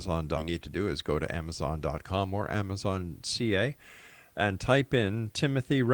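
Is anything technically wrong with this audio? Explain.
Yes. At 0.37–0.39 s there is a skip ahead: about 0.7 s of speech was discarded while later audio waited, so playback jumps forward with no silence, unlike a dropout's gap. From 0.47 to 1.38 s a jitter buffer speed-up trims pitch periods repeatedly, running about 9% fast and removing about a tenth of a second. The speech sounds hurried but keeps its pitch, unlike resampling.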